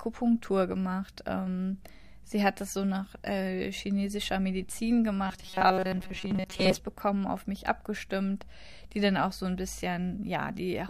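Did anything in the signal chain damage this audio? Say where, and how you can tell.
Yes, at the driver or buffer stage. From 5.27 to 6.79 s, just before "bekommen auf mich abgestimmt", the speech becomes a rigid metallic buzz at 188 Hz: robotic sound from repeated short buffers. A starved buffer likely looped 5.3 ms chunks, skipping most of the real audio.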